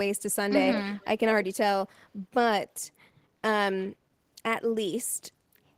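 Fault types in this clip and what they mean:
Echo leak: from 0.73 to 1.06 s, a quieter copy of the speech trails by about 180 ms, likely a loudspeaker's sound escaping the far end's echo canceller.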